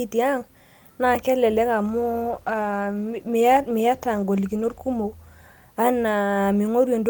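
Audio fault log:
1.86–5.87 s, call bitrate drop after "naa kelelek": coarser, muffled coding with highs trimmed, which fits a fall from 40 to 17 kbps, bottoming out for 2.94 s.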